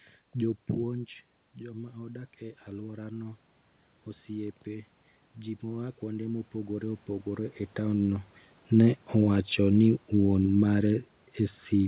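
From 0.77 to 3.45 s, automatic gain rising is audible. The input drops by about 11 dB as the talker moves away, and the gain control slowly adds about 5 dB. Voice and room noise swell together. It repeats from 4.26 to 7.54 s, with about 6 dB added.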